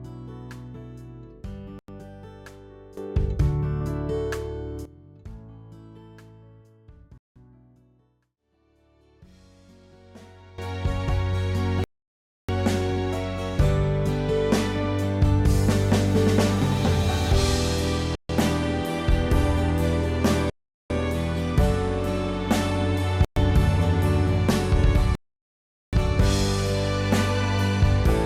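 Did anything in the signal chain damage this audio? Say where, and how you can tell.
Yes. Bluetooth stalls in playback: the sound drops to silence at 1.79, 7.18, 11.84, 18.15, 20.50, 23.25 and 25.15 s, for 93 to 777 ms each. The likely cause is a headphone buffer running dry while packets were resent.

Sudden gain jumps, likely in the digital gain stage: sound and noise floor leap together by about 14 dB from 2.97 to 4.85 s, and about 16 dB from 10.58 s to the end, with no ramp.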